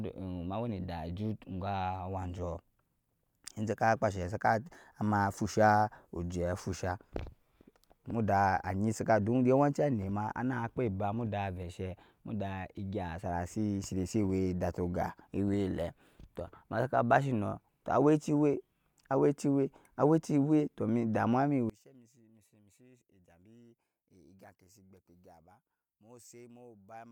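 From about 21.7 s to the end, the speech suddenly collapses when heard in mono, dropping by about 27 dB to a faint remnant. That points to one channel inverted, most likely one side of the stereo pair picking up reversed polarity. The centred voice is nearly identical in both channels, so summing them cancels almost all of it. What's left is just the small difference between the two sides, hence that faint trace.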